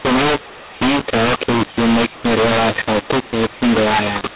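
From start to finish the speech carries a mu-law and A-law mix-up: telephone audio coded with mu-law is decoded as A-law, so levels are remapped unevenly. The result is a harsh, gritty distortion and hiss filling the pauses, unlike clipping, which leaves silence clean.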